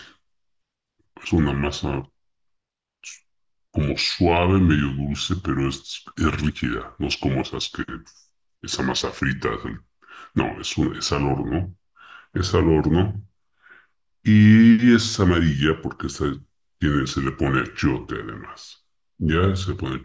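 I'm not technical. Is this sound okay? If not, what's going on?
No. The whole clip has a wrong sample rate problem: the recording is being played back more slowly than it was captured, with nothing correcting for the difference. Speed and pitch drop together, so the speech runs at about 0.73 times its proper pace and sits about 5.5 semitones lower, sounding deep and sluggish throughout. That ratio fits audio captured at 22 kHz but played back at 16 kHz.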